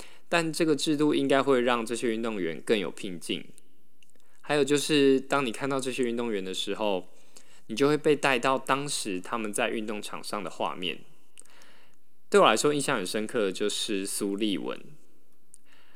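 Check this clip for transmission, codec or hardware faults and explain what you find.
One fault is present: a DC offset running through the whole of the speech, from start to finish. The waveform sits permanently displaced from zero by a constant of about -39 dBFS, typically from a biased converter or an uncorrected input stage. It cannot be heard as a tone, but it eats a little headroom and appears as a steady spike at 0 Hz. Unlike mains hum or rumble, it has no frequency, no harmonics and no fluctuation.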